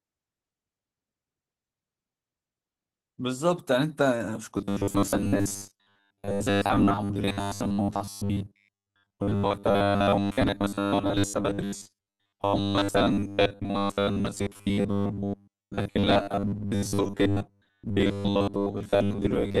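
The speech in this clip has passed through Opus voice compression in hybrid mode, with the SILK linear-prediction coder handling the lower band and a CELT layer coding content above 8 kHz. The excitation is coded coarsely, which points to a low rate of around 16 kbps in 20 ms frames. The full band is kept, but the damage is plainly audible throughout: the voice sounds hoarse, slightly muffled in texture, and faintly synthetic. From 4.58 s to the end at about 20 s, a second fault takes over, robotic sound from repeated short buffers. Audio is likely reaching the playback side too seldom, so the software fills each gap by replaying the last short stretch while most of the real signal is skipped. The repeats lock the sound onto a rigid 100 Hz buzz, consistent with a 10 ms buffer, and the voice becomes a metallic drone that only loosely tracks the speech.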